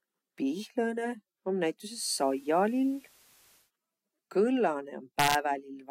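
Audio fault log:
1.87–3.71 s, digital radio blending to analogue: a faint hiss rises underneath the speech, roughly 30 dB below the speech, with a level shift of about 1 dB. The receiver lost its digital stream and cross-faded over about 173 ms to the station's FM broadcast, then faded back at 3.71 s. The FM broadcast's noise floor brings the hiss.
5.19–5.35 s, integer overflow: loud peaks in the speech break into harsh, violent cracks, much sharper than ordinary clipping. The signal was driven about 2 dB past the largest value the integer format can hold, and the processing did not limit it there. Each peak that crossed the limit wrapped to the opposite extreme, so the waveform jumped across the full range in an instant, and those jumps are the cracks.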